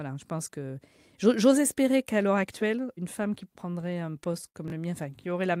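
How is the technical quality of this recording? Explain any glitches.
Two glitches stand out near the end of the speech.

From 3.61 to 4.56 s, just after "une femme qui", there are repeated stalls (stutter). Packets arrived late, draining the jitter buffer ten times. Each gap was filled by extending the last sound, about 149 ms in all with the longest 59 ms, so the speech drags and stutters without losing content.

At 4.68 to 4.72 s, chunks play out of order. A 20 ms chunk arrived one chunk late and plays after its successor, giving a brief jumbled moment.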